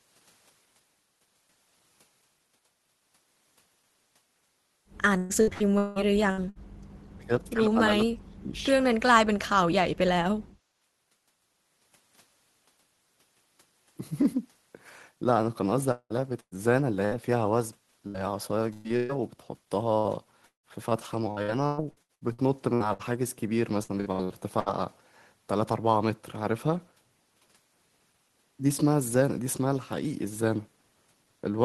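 From 5.17 to 6.58 s the stream suffers repeated packet loss (robotic sound). The receiver keeps losing or receiving late chunks of audio and fills each hole by stretching the last sound it had. Six gaps land in about 1.4 s. The longest is 178 ms, and roughly 0.54 s of the stretch is patched. The result is choppy speech with pieces missing.

Right after that, from 6.72 to 6.87 s, comes background gated by the echo canceller. The canceller clamps the microphone while the loudspeaker is active, and the room sound drops by about 16 dB for roughly 150 ms before coming back.

Next, speech is suppressed in double talk, likely because both ends talk at once and the echo canceller cannot tell the near talker from the loudspeaker echo, so it pulls everything down. From 7.18 to 7.56 s the talker dips by around 20 dB. From 7.73 to 8.63 s the cut is far deeper, around 40 dB, and about 700 ms of that stretch is affected.

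The longest stretch is the second bout of repeated packet loss, from 15.91 to 24.69 s. Twenty-four gaps are scattered across nearly 9 s, the longest 187 ms, and about 1.8 s of audio is concealed in total. The choppy quality keeps returning across the whole span.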